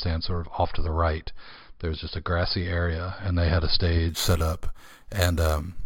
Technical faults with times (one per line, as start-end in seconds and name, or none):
4.09-5.85 imaging from sample-and-hold upsampling